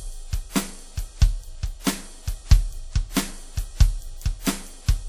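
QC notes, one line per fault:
Throughout, WMA compression: the music sounds washy and ringing, with a hiss that breathes with the signal. Nothing is heard above 18.6 kHz. This likely comes from a long-block transform codec zeroing weak detail, and fits a low bitrate near 48 kbps.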